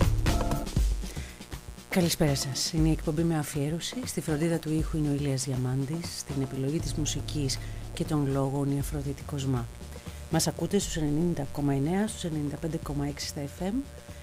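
A steady, raspy buzz sits under the whole clip, roughly 20 dB down: mains buzz, where switching spikes leak in from the 60 Hz supply.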